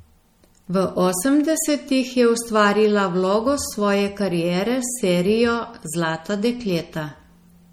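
From start to finish the speech carries plainly audible MP3 compression damage, likely from encoding at a low bitrate around 48 kbps. The sound takes on a watery, swirling quality as weak frequency components flicker in and out between frames. The s sounds turn metallic and chirpy, and consonant onsets smear. A simple low-pass filter would only dull the sound; it would not add this warbling.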